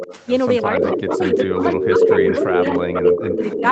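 From 0 to 0.25 s there is an echo leak: the far end's echo canceller likely let its loudspeaker pickup through. A fainter copy of the speech trails about 296 ms behind.

From 0.61 s to the end, speech is suppressed in double talk. The canceller likely could not tell the talker from the echo while both sides spoke, so it turned the voice down by up to about 20 dB. The speech dips and fades in stretches.

From 0.63 s onward the echo leak returns with a 301 ms delay. The copy is now about as loud as the speech itself, giving a doubled, smeared sound.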